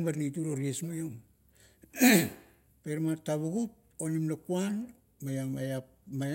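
No technical faults can be heard in this recording.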